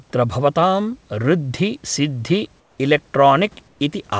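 From 2.60 to 2.78 s, the room background drops out and a smooth, featureless hiss takes its place. It is about 7 dB quieter than the real background. The same thing happens from 3.68 to 3.80 s, with a smaller drop of about 2 dB. This is comfort noise in place of the background. The likely cause is discontinuous transmission: the sender went silent during the pauses, and the receiver filled each gap with synthetic noise.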